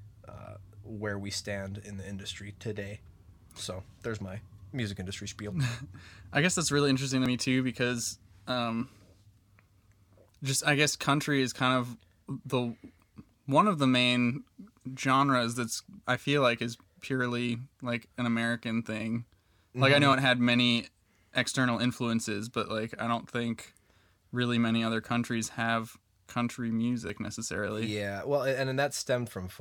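A speech clip with three spots where the sound jumps ahead: 7.26 s after "that's really interesting to", 20.13 s after "I know", 27.10 s after "other countries have country". Roughly 40, 10 and 40 ms vanish. Likely dropped buffers (overrun).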